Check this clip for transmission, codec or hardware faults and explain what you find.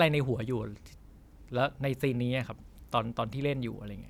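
No faults found in this recording.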